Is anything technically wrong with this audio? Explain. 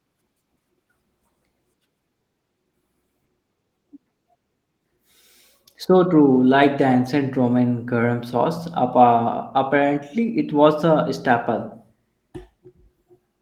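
No, nothing in this speech stood out as technically wrong on listening.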